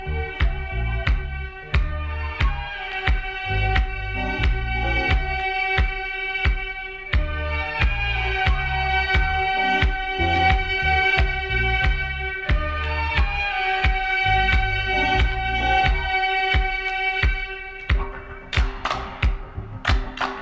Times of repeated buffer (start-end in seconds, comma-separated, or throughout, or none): none